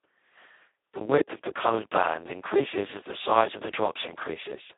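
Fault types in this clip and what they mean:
Speex codec: a low-bitrate CELP speech codec, heavily starved here, so the speech turns hoarse and robotic, fitting roughly 2 kbps, with nothing above 3.8 kHz.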